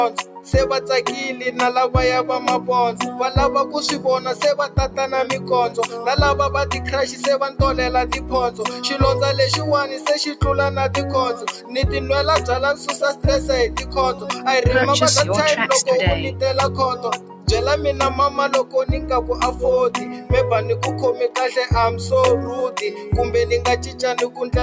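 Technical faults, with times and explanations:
Throughout: noise suppressor applied to music or sounds. A suppressor tuned for speech stays active on this audio. It treats held tones, ambience and reverb as noise and keeps pulling them down. The level swings by around 5 dB as it reacts. Attacks pass, while sustained parts and tails sink, so the sound pumps and thins. The call microphone chain's band limit, with nothing above 8 kHz, is separate and not at fault.
0.10–0.53 s, 2.61–8.83 s, 11.35–14.46 s, 16.95–20.30 s, 22.91–24.41 s: sound cut by the noise suppressor. In each span the suppressor judges parts of the sound to be noise and ducks them harder than the rest. Drops reach about 10 dB, and about 9 dB in the second and last spans. Only brief stretches are hit, from under half a second to about a second per span. Steady and fading parts dip or end early. Sudden onsets survive.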